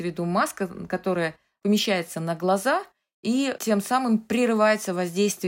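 Nothing in the signal of this short speech recording points to a technical fault.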